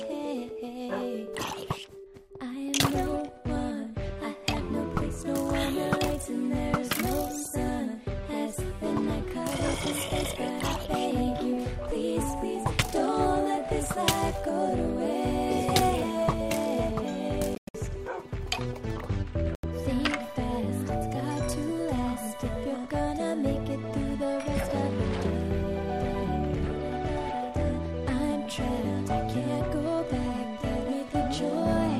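Bluetooth dropout at 17.55 to 17.76 s, with broken gaps totalling 168 ms (longest 98 ms), and again at 19.55 to 19.65 s for 84 ms. The sound cuts to silence and resumes as if it had played on, likely because wireless packets arrived late and were discarded.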